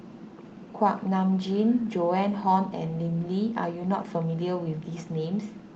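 No technical faults are audible.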